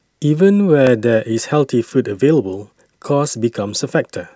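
At 0.87 s there is a single sharp click in the speech. It is brief and isolated, with nothing lost that the ear can follow. The likely cause is dropped samples. A tiny stretch of the stream, around half a millisecond, went missing. The waveform then leaps straight from one value to a later one. That sudden step is what produces the click. In a spectrogram it would show as one thin vertical line.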